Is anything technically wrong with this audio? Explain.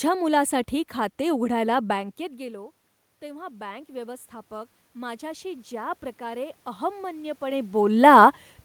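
Yes. From 1.92 s to 7.7 s, just after "मुलासाठी खाते उघडायला", the automatic gain control saw the input drop by about 18 dB as the talker moved back, and slowly raised its gain by about 11 dB. The voice and the room noise swell together rather than recovering at once.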